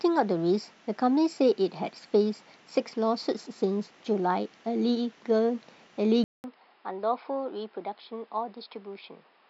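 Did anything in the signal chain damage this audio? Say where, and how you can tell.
Yes: the input likely switched to a poorer device at 6.24 s. After a 200 ms gap, the speech stops at 5.2 kHz, sounds slightly quieter, and carries faint new noise.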